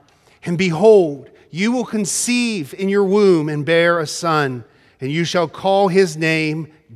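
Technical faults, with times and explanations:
No technical faults can be heard in this speech recording.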